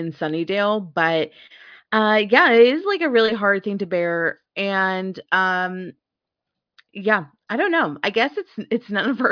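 No technical faults can be heard anywhere in the recording.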